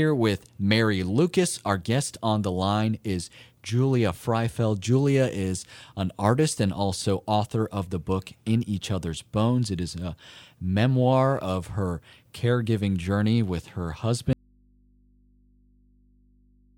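At 14.33 s, just after "caregiving journey with her", the speech cuts out abruptly. This is an audio dropout to a faint residue. Only mains hum remains, roughly 35 dB down. It never recovers, likely from a lost signal feed into a still-live input.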